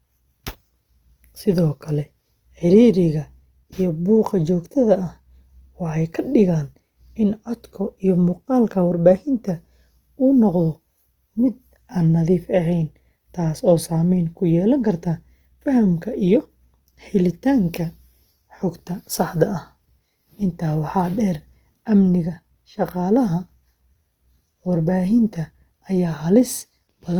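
A speech recording carries plainly audible Opus compression from start to finish, likely from encoding in its CELT music mode at a low bitrate near 24 kbps. Bands are filled rather than emptied, so the sound turns grainy and rough, while content still extends to about 20.1 kHz.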